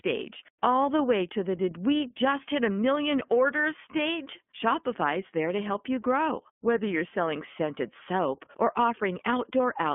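Throughout, the iLBC codec confines the speech to 200 Hz–3.4 kHz. Independently coded 30 ms frames give a plainly rough, synthetic edge, consistent with 13.33 kbps.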